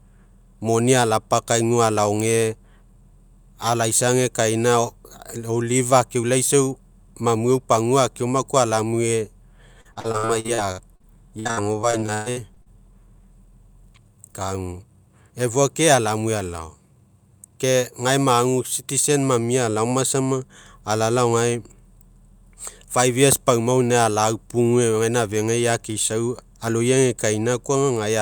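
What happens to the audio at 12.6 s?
At 12.6 s the speech is near the end of a stretch of repeated packet loss (robotic sound) running from 9.81 to 12.68 s. About twenty short dropouts follow one another, each patched by stretching the last sound, so about 28% of the span is filler and the longest hole lasts 121 ms. Unlike a single dropout, the holes arrive in quick succession, giving a choppy, robotic texture rather than one isolated glitch.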